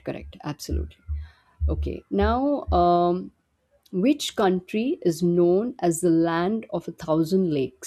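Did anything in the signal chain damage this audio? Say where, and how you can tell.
No, the chain caused no damage.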